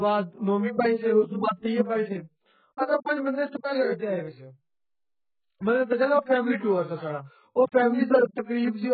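From start to finish the speech is dull and smeared, with a watery, warbling texture on sustained vowels and sibilants, which heavy AAC compression at a very low bitrate would likely cause. A spectrogram shows a hard ceiling near 4.6 kHz with patchy, holed bands beneath it.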